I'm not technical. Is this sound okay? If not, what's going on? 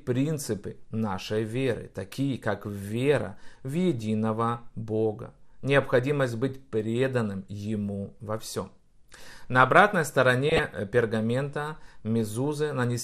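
No. Throughout the clip the speech sounds dull and plainly gurgly, with a grainy roughness on top. That is most likely MP2 compression: the encoder had too little data to spend, so it switched off the upper treble and stored what remained only coarsely.

From 10.49 to 10.64 s, just before "э пергамента", there is a short burst of burbling. This is DAB burbling: corrupted data slipped through error correction, putting brief blips of noise into individual frequency bands over the speech.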